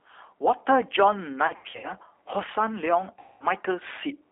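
Speech clip. A channel delay causes comb filtering: one channel runs late by a tiny amount, around a tenth of a millisecond, before mono summing. That puts the first notch near 5 kHz and sounds hollow or phasey. The G.729 codec sound runs throughout, band-limited to 300 Hz to 3.6 kHz. It is plainly rough and synthetic, which fits G.729A at 8 kbit/s. VoIP packet loss concealed by the speech codec occurs from 1.47 to 1.92 s, with 210 ms lost in scattered gaps up to 90 ms long. It occurs again from 3.19 to 3.45 s. The decoder stretches the sound into a fading buzzy tone or coloured noise.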